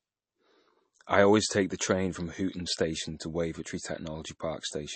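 MP3 compression, audible across the whole clip: the speech has a plainly watery, swirling quality, and nothing is present above 8.3 kHz. This is likely the result of lossy MP3 encoding. Short of bits, the encoder removed the treble above a fixed cut-off and discarded weak frequency lines, which flicker on and off between frames. The damage is heavy enough to suggest a low bitrate, around 32 kbps.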